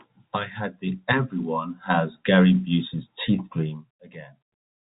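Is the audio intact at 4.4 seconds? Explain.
Yes, the audio is intact at 4.4 seconds, with no fault at that moment.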